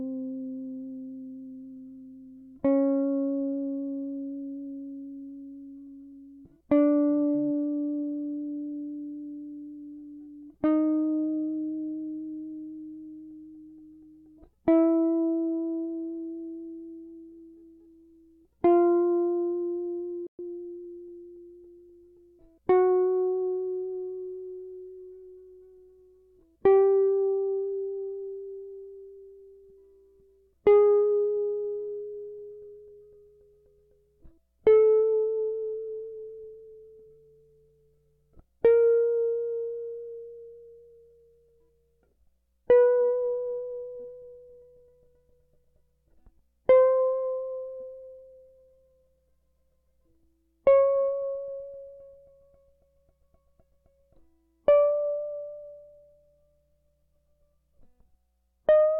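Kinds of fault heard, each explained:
Playback stall: the player most likely ran short of buffered data or had its output thread held up, so nothing reached the output for a moment. In this music the sound cuts off abruptly at 20.27 s and stays silent for 120 ms. That leaves a distinct hole in the middle of the flow, and the music then resumes at 20.39 s.
Time-compressed catch-up: having fallen behind during the gap, the player works off its backlog by dropping tiny slices of audio and cross-fading across the joins. From 20.39 s to 20.87 s the music runs at 1.25 times normal speed while keeping its pitch. The passage sounds hurried, then settles back to normal pace.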